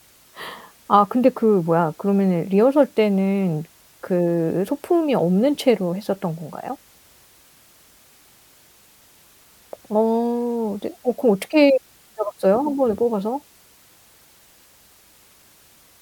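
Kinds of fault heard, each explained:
Low bit depth with dither: the speech sits on a steady, even hiss about 35 dB down, with no grit or distortion, which fits roughly 9-bit resolution.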